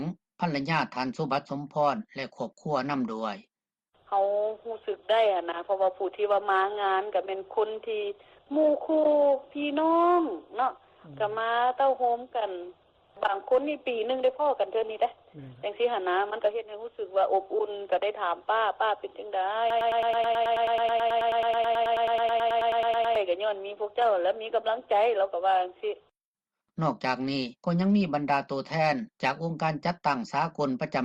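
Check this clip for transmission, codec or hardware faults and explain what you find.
Three faults, all in the middle of the clip.

At 14.83 s there's a skip ahead: about 0.7 s of audio was dropped, probably discarded when the jitter buffer overflowed, so playback jumps forward with no gap.

From 14.93 to 16.78 s a jitter buffer speed-up follows. The receiver trims short pitch-period slices, roughly 150 ms in total, to shed the extra delay, so the sound runs at about 107% speed with unchanged pitch.

From 19.70 to 23.16 s there's a broken-record loop: a 108 ms fragment repeats back to back 32 times, most likely because the stream stalled and kept resending its last piece.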